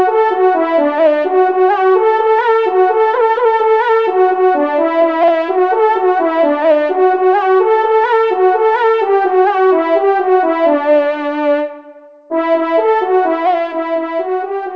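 No faults found; the audio has nothing above 8 kHz, which fits a wideband call codec such as G.722 on a working WebRTC call path.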